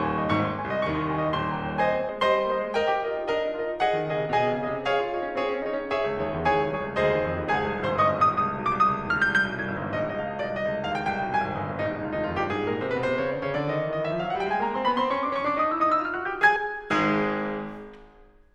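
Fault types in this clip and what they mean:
Compressed frames skipped: Whole compressed frames never reach the output, so the music jumps forward. At 2.08 s roughly a tenth of a second vanishes, and at 16.55 s somewhat less. The frames are 26.1 ms long.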